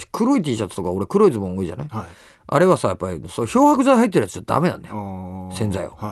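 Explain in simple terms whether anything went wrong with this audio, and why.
Nothing went wrong; this speech comes through as expected.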